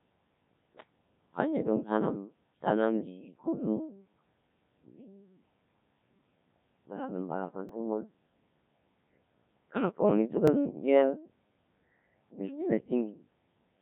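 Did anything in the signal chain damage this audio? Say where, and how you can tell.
Yes. At the codec stage, the whole clip shows the Codec 2 vocoder at about 1.3 kbit/s, with heavy damage: buzzy, robotic speech rebuilt from sine waves. A spectrogram shows nothing above 3.8 kHz and unnaturally regular harmonics, and the waveform doesn't match natural speech.

At the driver or buffer stage, a repeated buffer appears at 7.69 s and again at 10.48 s, just after "karena pohong". Each is a tiny click or buzz. The waveform shows a 2.67 ms segment, which fits a 128-sample buffer, copied with hard joins, twice at the first point and once at the second.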